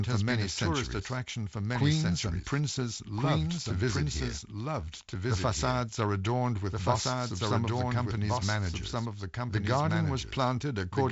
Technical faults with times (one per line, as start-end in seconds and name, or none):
0.00-11.11 doubled audio track